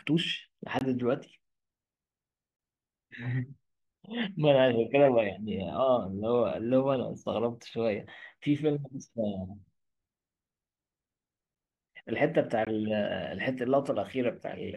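At 0.79 to 0.81 s the speech drops out for about 21 ms, a tiny hole, and at 12.65 s a slightly shorter gap of 18 ms gives the same kind of short dropout. Each is a block of digital silence: the samples were replaced by zeros with no fade, so the waveform jumps to zero and back. The first gap's length fits a 1024-sample buffer at 48 kHz that was not filled in time.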